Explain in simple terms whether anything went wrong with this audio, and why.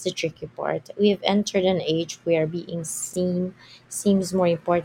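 Around 3.11 to 3.16 s, the speech briefly jumbles: two tiny slices of sound, each about 23 ms long, play in swapped order. This is chunks out of order. Unlike a dropout, no sound goes missing; one piece simply arrives a step late.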